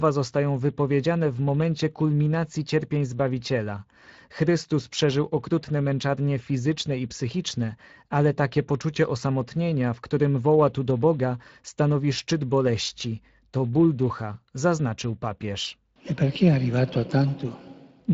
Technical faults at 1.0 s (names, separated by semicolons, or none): Speex codec